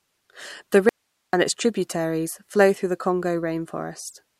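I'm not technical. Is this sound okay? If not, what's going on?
No. From 0.89 to 1.33 seconds, the speech drops out for a little under half a second, leaving only a very faint hiss. This is an audio dropout to a faint residue. The cut is sudden, not a natural pause or fade. The likely cause is a brief loss of the incoming signal while the recording chain itself stayed switched on, so its own background noise kept going through the gap.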